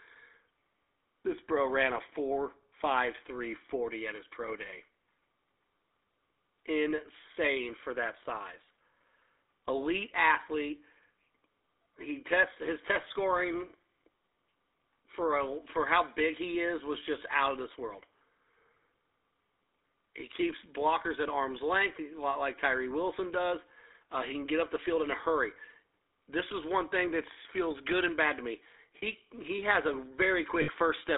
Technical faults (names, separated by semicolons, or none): GSM full-rate codec; lost GSM frames